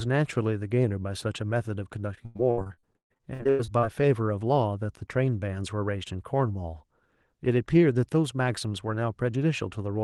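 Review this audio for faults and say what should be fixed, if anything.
Repeated packet loss (robotic sound) from 2.25 to 3.85 s: nearly half this stretch is filled by extending earlier sound, with gaps up to 134 ms. The rapid succession of patched holes, not one isolated dropout, creates the choppy texture with pieces missing. Enabling Opus in-band FEC and a more stable network path or larger jitter buffer would prevent it.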